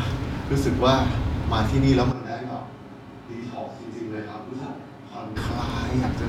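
At 2.13 s the speech abruptly turns hollow and roomy, drops roughly 10 dB with thinner bass, and room noise becomes audible, snapping back at 5.35 s. This is likely a switch to a distant microphone; unlike added reverb, the noise floor jumps too.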